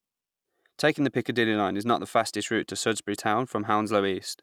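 No technical faults are audible.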